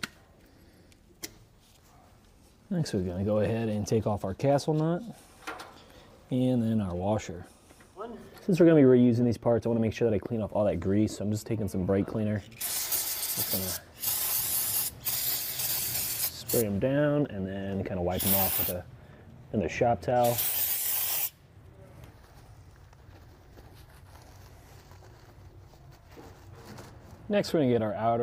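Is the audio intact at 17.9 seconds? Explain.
Yes, the audio at 17.9 seconds is intact, with no dropout, click, distortion or other fault to be heard there.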